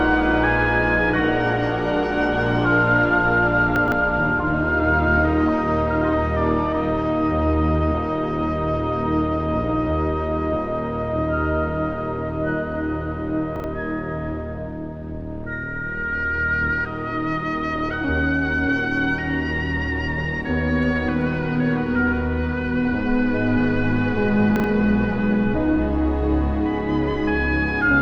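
At 3.76 to 3.92 s, then 13.56 to 13.64 s and 24.56 to 24.64 s, there are chunks out of order. A 40 ms block plays three chunks late in the first, one late in the others, so you hear a brief jumbled stutter at the hard joins.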